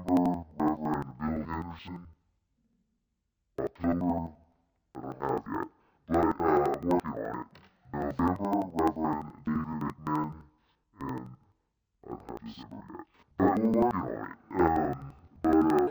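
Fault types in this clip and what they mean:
Interleaved audio read as planar: each block of alternating left and right samples is split down the middle, so the first half plays as left and the second as right, each stretched to half speed while the overall pace holds. Throughout the clip the blocks last about 85 ms, which fits a 4096-sample block, so the sound drops a full octave, comes out doubled and choppy, and stutters at roughly 11.7 Hz.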